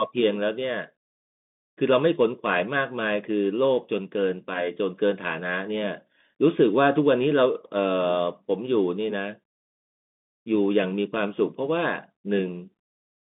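Throughout, a Bluetooth CVSD headset codec cuts everything above 3.8 kHz; its one-bit steps leave scratchy s sounds and a granular hiss that plain telephone band-limiting lacks.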